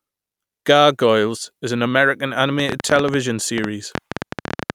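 Speech, with a train of clicks from 2.60 s to 4.71 s: some thirty similar pulses at an uneven rate averaging 11.9 per second, peaking about 15 dB above the speech and audible through pauses. The likely cause is electrical interference or a faulty connection or power supply.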